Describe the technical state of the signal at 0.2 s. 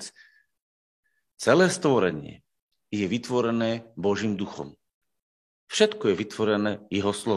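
At 0.2 s the speech signal is intact, with no technical fault audible at that moment.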